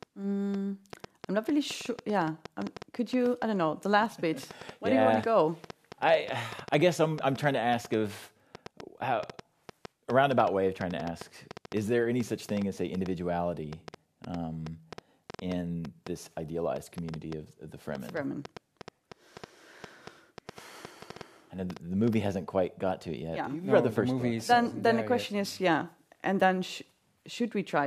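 A speech recording carries a train of clicks from 0.03 s to 22.14 s. The clicks share much the same sharp shape. They arrive about 5.2 times per second, at an uneven pace. There are roughly a hundred in all. They peak around 10 dB above the speech. They tick and pop over the talking and through the pauses. A likely cause is interference from nearby equipment or a faulty connection or power supply injecting pulses.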